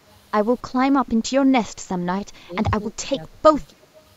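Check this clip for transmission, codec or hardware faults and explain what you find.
Two kinds of fault are present: speech suppressed in double talk, then a brief echo leak near the end.

Speech suppressed in double talk occurs at 1.46 to 1.52 s, 2.32 to 2.55 s and 2.91 to 3.35 s. The speech level dips. The first dip is slight, around 5 dB. The later two go deeper, around 15 dB. The likely cause is an echo canceller hearing both sides at once. It could not tell the talker from the returning echo, so it turned everything down.

An echo leak appears from 3.81 to 4.01 s. A faint delayed copy of the speech trails the original by 274 ms. It sits far below the speech, so it is easy to miss. The likely cause is a loudspeaker at one end, with its echo canceller missing part of what the microphone picked up. That residue was sent back down the line.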